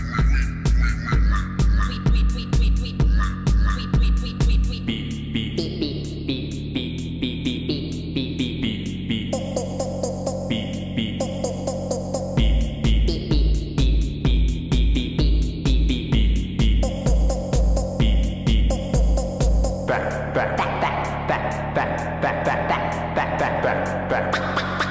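Nothing stood out on listening; no technical problem could be heard anywhere in the clip.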